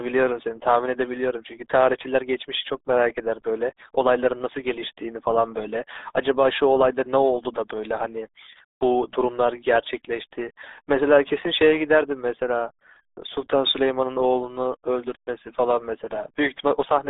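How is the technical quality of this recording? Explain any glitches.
Poor. One fault runs through the whole clip. Throughout, the speech carries RealAudio 14.4 codec damage. The band sits between 300 Hz and 3.7 kHz, with nothing above 3.8 kHz. The heavy, gargly smearing points to a very low bitrate, around 8 kbit/s. Speech sounds muffled and bubbly.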